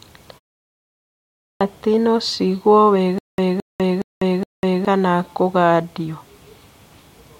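At 1.37 s, speech resumes after a 1.06 s pause with a clipped start. The output was waking, so about 236 ms of onset vanishes and the sound begins abruptly.

From 3.18 s to 4.85 s there is a stutter with silent gaps. A 218 ms fragment repeats four times, each followed by 198 ms of digital silence, every 416 ms. A stalled stream replaying its last fragment is the likely cause.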